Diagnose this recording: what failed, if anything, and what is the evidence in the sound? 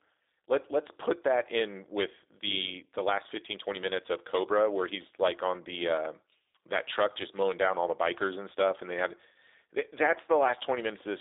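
The codec stage is at fault: the speech has been through G.729, and the damage is plainly audible across the whole clip. Nothing gets through above 3.8 kHz, and the usable band sits at roughly 300 Hz to 3.7 kHz, so it has that narrow phone-line quality. The roughness and slightly synthetic edge come from the speech being rebuilt from a vocal tract model, pitch prediction and a few pulses per frame. That sound fits an 8 kbit/s G.729A stream.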